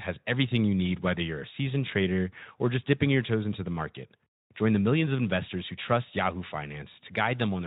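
Nothing in this speech recording stood out as a technical fault on listening, and the Speex coding it passes through leaves only a light trace.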